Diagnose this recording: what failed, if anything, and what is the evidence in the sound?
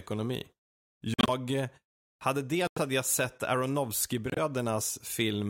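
The codec stage failed, with corrupt frames muted. The speech drops to abrupt silence three times: 1.14 to 1.29 s, just before "eh hade"; 2.66 to 2.79 s, between "eh hade" and "hade jag sett"; and 4.30 to 4.39 s. Each hole starts suddenly and spans several frame lengths. Damaged compressed frames were rejected by the decoder. The player inserted silence instead. Timing stays intact.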